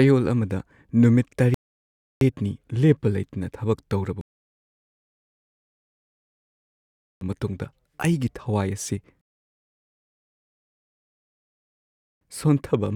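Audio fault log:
1.54–2.21 s, 4.21–7.21 s and 9.21–12.21 s: rebuffering stall, three times. The speech drops to dead silence for about 0.67 s, then 3 s, then 3 s. The player ran dry of downloaded audio and waited for more, then picked up exactly where it left off, so nothing's missing, just dead air added.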